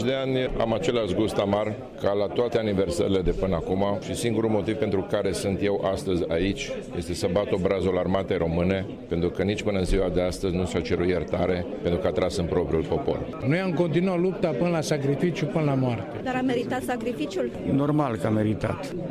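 No technical faults are audible anywhere in this audio.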